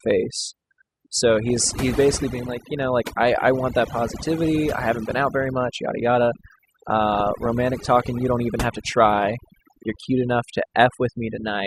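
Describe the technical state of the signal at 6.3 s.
At 6.3 s the speech carries overdone noise removal, present across the whole recording. Frequency bands near the estimated noise floor are pulled far down or gated off, taking low-level parts of the voice with them, so the background drops and breaks up into twinkling specks.

Also present throughout is a dull, band-limited sound with gurgling, granular distortion and upper frequency regions flickering in and out. The likely cause is MP2 compression at a low bitrate, consistent with about 80 kbps, where sub-bands starved of bits are switched off and the remaining ones are coarsely quantised.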